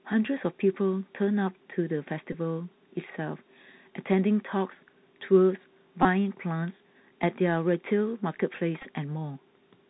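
A thin, muffled quality runs through the whole speech clip, with a scratchy edge on s sounds, a grainy hiss beneath the voice, and roughness on loud, bright moments. This is the Bluetooth CVSD headset codec at 64 kbps. Each sample is sent as a single up-or-down bit while the step size adapts, and nothing above 4 kHz survives. Fast, loud high-frequency movement outruns the step, which produces that gritty distortion.

At 2.33 s there is a short buzzy stutter lasting about 15 ms. The same thing happens from 6.03 to 6.05 s, about 19 ms. From 8.81 to 8.87 s the roughness is broken up over roughly 38 ms in short bursts, the longest around 7 ms. Each is a Bluetooth headset packet repeated: voice packets went missing, and the chip decoded the previous packet again every 3.75 ms. That repetition gives the brief flutter near 267 Hz.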